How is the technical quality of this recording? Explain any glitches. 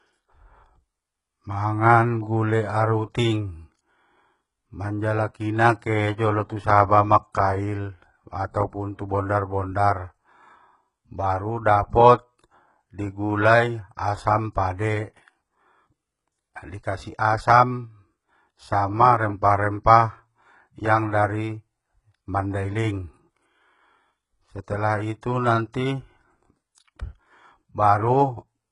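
The quality is poor throughout, from the first second to the last. The likely cause is HE-AAC compression at a very low bitrate, consistent with about 12 kbps. Only the lower band is properly coded; the treble is rebuilt by copying lower bands upward under a coarse envelope, and nothing survives above 11 kHz. Because the rebuilt harmonics do not align with the real ones, s sounds come out gritty and lispy, with a metallic sheen over the speech.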